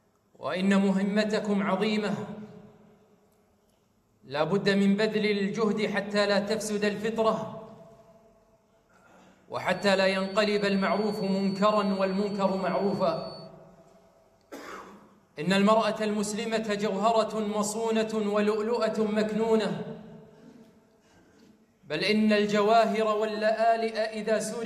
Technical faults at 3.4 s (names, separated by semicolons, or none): none